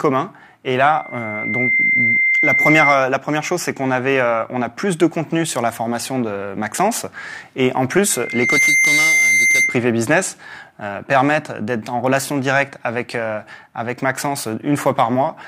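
Loudspeaker feedback squeal at 0.94–3.10 s and 8.10–9.88 s: the mic–speaker loop swells within a second into a 2.1 kHz howl, a bright horizontal spectrogram line.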